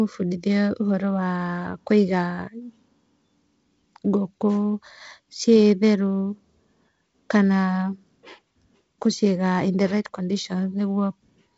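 Nothing stood out on listening; the speech carries the sound of G.722 wideband telephone coding, with content reaching to about 7.7 kHz and the slightly noisier lower band that fits the 48 kbit/s mode.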